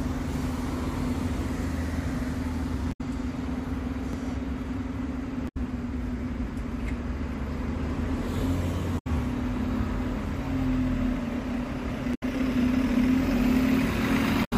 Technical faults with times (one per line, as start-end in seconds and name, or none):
2.89-3.01 damaged data in a compressed stream
5.45-5.57 damaged data in a compressed stream
8.95-9.07 damaged data in a compressed stream
12.11-12.23 damaged data in a compressed stream
14.41-14.53 damaged data in a compressed stream